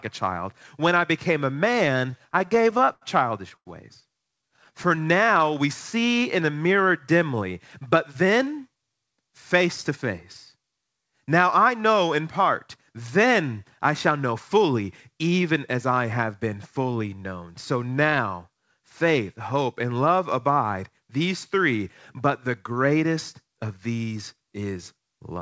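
Speech, carried over a call path whose 8 kHz ceiling points to a wideband codec like G.722 at 64 kbps, with jitter-buffer trouble. Right after "I became a", from 2.00 to 3.68 s, there's a run of repeated stalls (stutter). The buffer kept running dry, and about fifteen gaps got papered over by stretching the last sound, roughly 0.3 s in total, the longest 94 ms. Nothing is lost, but it drags and catches. From 4.28 to 6.20 s a jitter buffer slow-down kicks in. The receiver repeats pitch periods to rebuild its reserve, adding 149 ms and running at 93% speed without changing pitch, so it sounds drawn out. Inside that, at 4.57 to 4.99 s, five more tiny stalls (longest 13 ms) add a stutter. Then there are two jitter buffer speed-ups, where an overfull buffer trims pitch periods to cut delay, running at 109% at the same pitch. The first is from 8.15 to 9.68 s, between "in a mirror dimly" and "to face", dropping about 150 ms. 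The second is from 19.54 to 19.91 s, between "now faith" and "love abide these three", dropping around 40 ms, and both sound a bit hurried.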